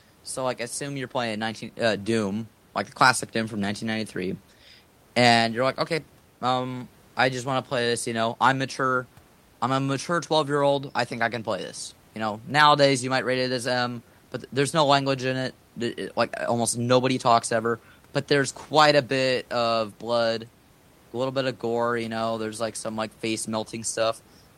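Nothing goes wrong with this speech anywhere along the way, and the only extra sound is a bit of room noise sitting about 33 dB below the talking, which is simply part of where it was recorded.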